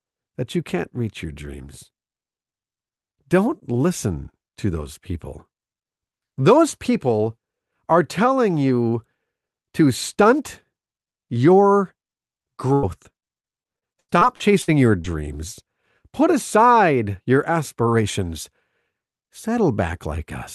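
At 12.73 to 12.85 s a burst of packet loss removes about 100 ms of the speech. The receiver stretches the last sound across the hole, so it turns into a brief held buzz or hiss that fades before the speech picks up again further along. On a spectrogram the harmonics run flat and dim, and the waveform shows a decaying, oddly regular stretch.

Two short concealed packet losses follow at 13.13 to 13.16 s and 13.20 to 13.24 s, each losing about 20 ms. The gaps are patched and blended back in, heard as a quick smear or wobble. They show as thin vertical seams in the spectrogram, where detail briefly blurs.

From 13.62 to 15.06 s, repeated packet loss gives a choppy sound. Eight separate holes, totalling about 320 ms and up to 90 ms each, are filled by extending the preceding sound. About a fifth of the stretch is synthetic. The spectrogram shows repeating frozen, smeared patches, and the waveform has a stuttering, uneven envelope. 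Throughout, the call path's low-pass limit is visible as an empty band above 12 kHz.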